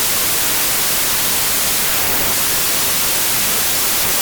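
From start to finish there's a wrong sample width problem: packed 24-bit audio is being read as 16-bit, so most values stitch together mismatched bytes. You get loud noise with the speech buried underneath, dragging along at two-thirds speed and pitched down to match.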